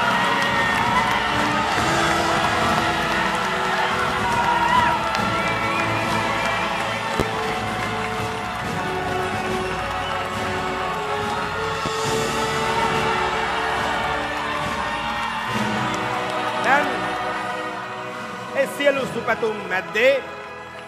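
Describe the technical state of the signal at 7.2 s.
A single loud pop sits at 7.20 to 7.23 s. It peaks about 20 dB above the surrounding sound. The likely cause is a sudden voltage pulse, from a switch, plug, static or driver glitch, added to the signal. It sounds like a sharp thump over audio that continues underneath.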